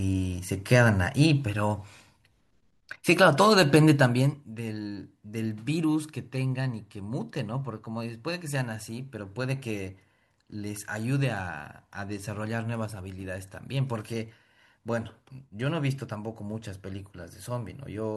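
From 3.91 to 4.46 s, gain falls about 10 dB in unsmoothed steps, roughly a hundred per second, producing zipper noise: ticking over the speech.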